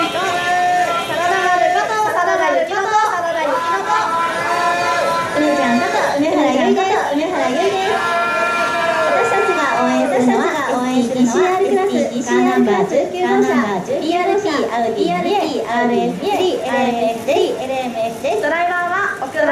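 A doubled audio track runs throughout: the whole sound repeats about one second later at roughly equal level, likely from a second, slower capture path. The waveform and spectrogram show every event duplicated a second apart.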